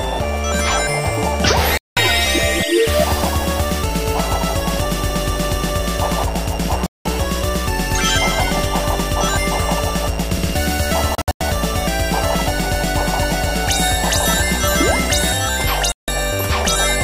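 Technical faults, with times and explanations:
1.78 to 1.97 s, 6.86 to 7.06 s, 11.15 to 11.41 s and 15.92 to 16.08 s: digital broadcast dropout. The receiver stopped getting clean frames and muted, so the sound cuts or quickly fades out for roughly 190 ms each time (160 ms in the last one) and picks up later, with whatever aired in between gone. That fits a handful of 32 ms frames failing. The third one's choppier, broken into short holes over about 256 ms, the longest around 96 ms.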